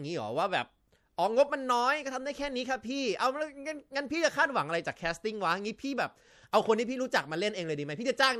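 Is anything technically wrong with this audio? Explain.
Yes. Throughout the speech, the audio shows plainly audible MP3 compression damage, likely from an encoder running short of bits, consistent with a rate near 64 kbps. Starved of bits, the encoder discards weak frequency lines that then flicker in and out from one frame to the next. The result is a watery, swirling texture, metallic chirps on s sounds, and smeared attacks.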